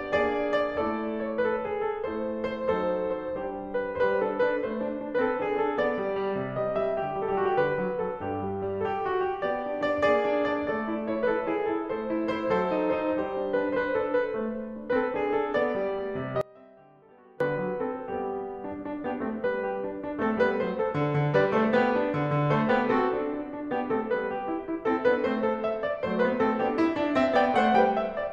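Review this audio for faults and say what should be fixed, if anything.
The music suffers an audio dropout to a faint residue from 16.41 s to 17.40 s, lasting about 0.99 s. The programme vanishes abruptly rather than fading, and what remains in the gap is a faint leak of the music roughly 25 dB below its normal level. The return at 17.40 s is equally sudden. The likely cause is a brief break in the signal feed while the downstream path stayed live, passing only the low-level bleed. Secure and monitor the source connection and any switching in the chain so the feed cannot drop out mid-programme.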